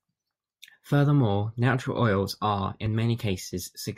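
Speech clip with a single tiny skip at about 2.86 s, where roughly 3 ms of sound drops out and the waveform jumps. That's an overlap between stream segments: two adjacent chunks, which fits 1-second segments, claimed the same moment, and the player trimmed sound that wasn't actually duplicated.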